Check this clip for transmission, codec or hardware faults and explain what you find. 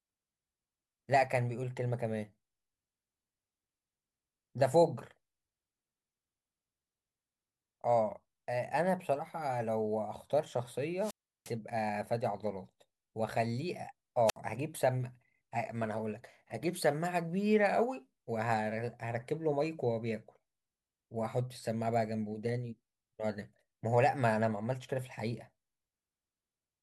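Two wireless microphone squelch dropouts interrupt the speech, at 10.98 to 11.54 s and 14.26 to 14.37 s. As the FM radio link weakens, the receiver's squelch shuts the output, leaving holes of near silence lasting about 0.35 s and about 63 ms. A brief surge of hiss or static just before each mute sets this apart from network packet loss, which simply cuts out or smears without any rising noise.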